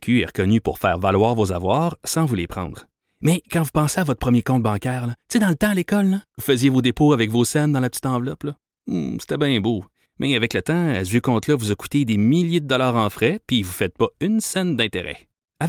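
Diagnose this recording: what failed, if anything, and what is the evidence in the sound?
Nothing failed; no stage shows any audible problem.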